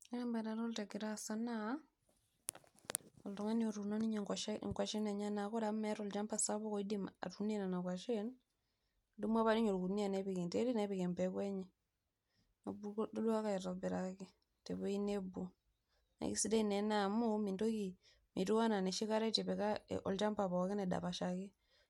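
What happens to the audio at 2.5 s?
Nothing goes wrong at 2.5 s; the speech continues intact through that moment, with no dropout, click or distortion.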